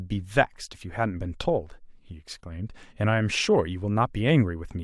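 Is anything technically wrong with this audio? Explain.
No, nothing is technically wrong with this audio.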